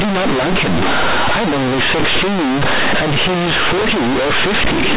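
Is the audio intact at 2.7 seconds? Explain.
No. At 2.7 seconds the speech suffers from companded audio read as linear, which runs through the whole clip. Its mu-law bytes are played as plain 8-bit samples without expansion. Quiet parts swing as wide as loud ones. The result is loud, buzzy distortion with heavy noise in pauses.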